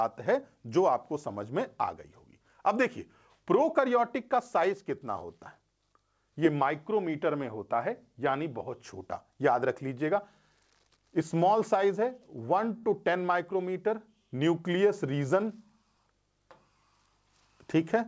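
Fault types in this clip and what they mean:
Short stall from a late packet: At 12.78 s the sound is held for about 52 ms while the receiver stretched the last audio waiting for a late packet, then resumed from the same point. Nothing is lost, unlike a dropout, so it is a brief hitch with a slight buzz or dip.
Jitter buffer speed-up: From 15.29 to 15.70 s the audio runs at 110% speed because the receiver trimmed repeated pitch-period slices, around 50 ms in total, to drain excess buffered delay. Unlike a tape-style speed change, the pitch stays put and only the pace hurries.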